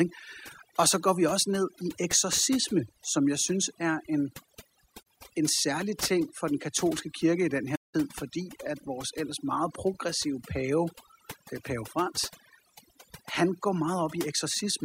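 A speech recording with overdone noise removal throughout: the suppressor was set too aggressive, so bands near its noise estimate are pulled down or cut entirely, taking low-level parts of the voice with them. The background drops and breaks up into twinkling specks. There is also AAC frame loss with muting in two places. The decoder zeroed the missing spectrum, and the overlapping windows fade the sound out and back in, leaving soft-edged holes. The first runs from 5.02 to 5.06 s, just before "en særlig ting for", and lasts about 43 ms, which fits two lost frames. The second runs from 7.75 to 7.95 s, between "katolske kirke i den" and "fordi at vores ellers", and lasts 192 ms, consistent with about nine frames.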